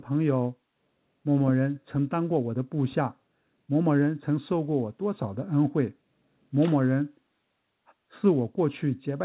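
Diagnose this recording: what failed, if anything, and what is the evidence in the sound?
Nothing in this recording points to a failure at any stage. The speech has no content above 4 kHz and a coding grain, which fits a working call path using a narrowband codec such as G.711 A-law.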